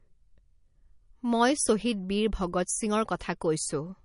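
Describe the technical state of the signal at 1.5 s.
At 1.5 s the speech carries MP3 compression artefacts, and these run through the whole clip rather than at that instant alone. Nothing is present above 10.6 kHz, where the encoder has cut the treble. The damage is plainly audible: weak spectral lines drop in and out between frames, giving a watery, swirling texture and metallic chirps on sibilants. The bit starvation likely reflects MP3 encoding at a low bitrate, which fits roughly 40 kbps.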